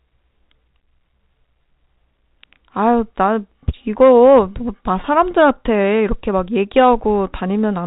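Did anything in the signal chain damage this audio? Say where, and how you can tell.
Yes, at the network stage: packet loss with pitch repetition at 5.02 to 5.04 s. About 20 ms of the speech briefly holds with a slightly buzzy quality, which fits a single lost packet. The receiver concealed it by repeating the last pitch period across the gap, through the G.711 telephone coding that limits the audio to 4 kHz.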